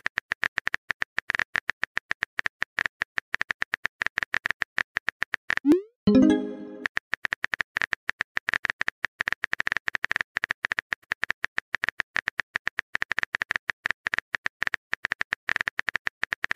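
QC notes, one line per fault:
5.72 s, 7.28 s and 11.04 s: dropped buffer (overrun). Each spot has the sound suddenly jumping ahead, with no gap or silence, as if a sliver was snipped out and the ends butted together. Roughly 40 ms seems to vanish each time. That's likely the capture side not reading its buffer before the hardware wrote over it, so a chunk was lost and the join lands on a discontinuity.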